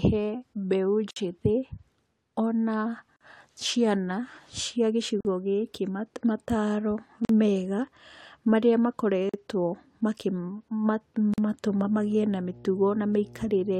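Gaps at a join of encoded pieces cut the speech at 1.11, 3.16, 5.21, 7.25, 9.29 and 11.34 s, one every 2 s. The first lasts 56 ms, the rest 43 ms. One falls after "ciana cia", before "gĩkĩ mataro mega". Separately encoded pieces were joined untrimmed, leaving encoder delay and padding as abrupt silences with smeared edges.

Mains hum enters at 11.67 s and runs to the end. It is a steady 60 Hz tone, roughly 20 dB below the speech. Power-line current has leaked into the signal, through a ground loop or nearby transformer.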